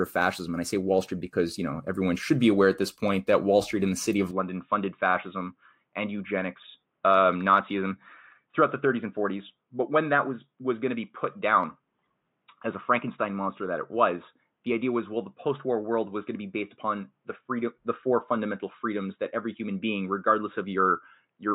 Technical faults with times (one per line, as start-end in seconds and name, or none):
4.31-21.54 input switched to a poorer device